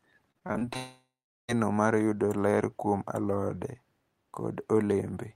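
From 0.31 to 0.77 s, packets go missing seven times, the longest gap 32 ms, and each hole is patched by stretching the preceding sound. This repeated packet loss leaves the speech choppy and robotic, with about a third of that span concealed.

From 0.77 to 1.50 s, a long network dropout is the likely cause. About 720 ms of speech never returns: a fading buzz extends the last sound, then 400 ms of silence, before speech resumes at "mar yudo ler kuom".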